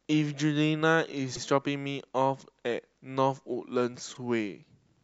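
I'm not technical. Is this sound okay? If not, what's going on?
No. The speech has repeated frames: short bits play twice, causing a stutter, at 1.35 to 1.43 s (78 ms) and 4.14 to 4.17 s (26 ms).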